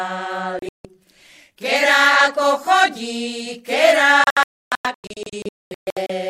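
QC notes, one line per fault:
0.59 to 0.85 s, digital broadcast dropout: the receiver stopped getting usable frames and muted until clean ones arrived, so the sound breaks into short holes totalling about 190 ms across 256 ms, the longest gap 160 ms. The gaps fall in steps that fit 32 ms frames.
4.24 to 6.10 s, digital broadcast dropout: a longer spell of failed reception mutes the audio repeatedly, losing about 1.18 s across 1.86 s, with gaps up to 288 ms before sound returns.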